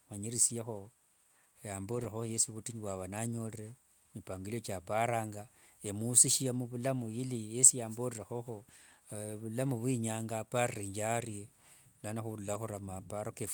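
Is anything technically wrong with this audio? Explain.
Yes. Three short stretches of this speech clip are rebuilt after packet loss, at about 0.49 s, from 1.91 to 2.05 s, and at 12.53 s. Each is a lost packet rebuilt from error correction. When a packet went missing, the decoder played the low-bitrate copy carried in the next packet, so the sound never drops out. Those stand-in frames are coarser, so each spot sounds briefly rough and hissy. The middle one has about 80 ms rebuilt, which suggests four separate lost 20 ms packets. On a waveform there is no gap. On a spectrogram, each spot shows as a narrow band of blurred, noisier texture.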